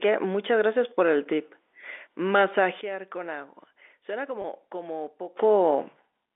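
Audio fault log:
2.81 to 5.36 s, sudden gain jump: at 2.81 s the speech drops by about 12 dB in a single step, and the background noise drops right along with it, so you hear the whole level fall at once instead of easing down. It comes back up just as abruptly at 5.36 s. That all-at-once move with no ramp is the giveaway; it's most likely a digital gain setting switched between one sample and the next rather than anything the talker did.
4.42 s, packet loss with pitch repetition: roughly 20 ms of audio went missing here, about one packet's worth. The receiver covered the hole by replaying the last pitch cycle it had, so for that instant the speech sounds slightly held and a bit buzzy, as if the voice sticks on one tone. The gap is short, so the repeat doesn't have time to fade to silence before real audio picks up again. This happens while the level is still down from the gain drop.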